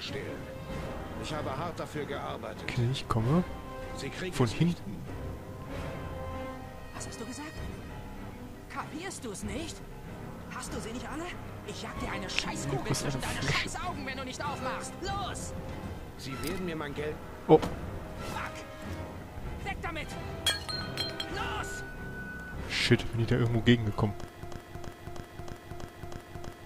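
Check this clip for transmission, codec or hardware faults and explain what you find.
One fault is audible: a broken-record loop at the very end. From 24.43 s to the end, a 320 ms fragment repeats exactly, back to back, seven times, giving a mechanical stutter. The likely cause is a stall in the player, encoder or stream that kept resending the last fragment it held, so the audio due in that stretch is lost.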